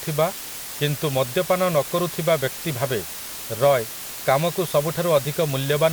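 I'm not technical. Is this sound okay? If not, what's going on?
No. The recording was stored with far too little detail, only 5 bits per sample, with a small random noise added before rounding, a fault called low bit depth with dither. It leaves a steady, even hiss under the speech from start to finish, quite loud but without crunchy distortion.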